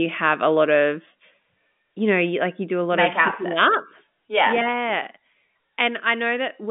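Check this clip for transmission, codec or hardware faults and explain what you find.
No transmission, codec or hardware faults are audible here.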